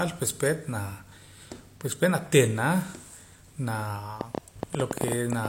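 Speech with a train of clicks from 4.21 s to 5.46 s: around fifteen uneven pops at 10.5 per second, about 15 dB above the speech. The matching shapes suggest likely interference or a loose connection, unlike random crackle.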